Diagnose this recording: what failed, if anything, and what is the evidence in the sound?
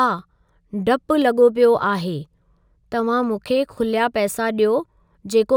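Imaging from linear upsampling at sample-rate conversion, throughout. Straight-line interpolation dulls the top and leaves a faint mirrored band from 12 to 24 kHz, roughly 35 dB down.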